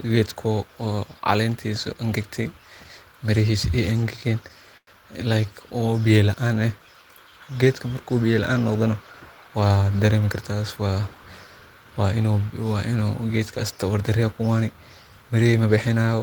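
Repeated stalls (stutter) interrupt this speech between 4.01 and 4.89 s. Packets arrived late, so the jitter buffer ran dry four times and the last sound was stretched, about 130 ms in all, longest 100 ms. Nothing is lost, but delivery drags.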